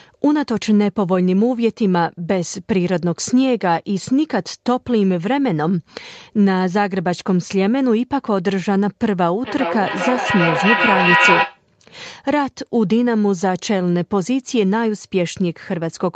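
From 9.45 to 11.63 s the speech is caught in a feedback echo between two devices: a second device in the room replays the call and the first device's microphone sends it back, untouched by that device's echo canceller. Each syllable returns roughly every 0.4 s, thinner and ringing, and the repeats build to about 3 dB above the speech. On a spectrogram, stacked copies of each syllable appear at even spacing, all cut off at 8 kHz by the call path.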